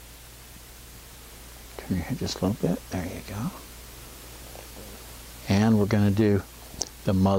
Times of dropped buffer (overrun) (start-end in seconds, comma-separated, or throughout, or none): none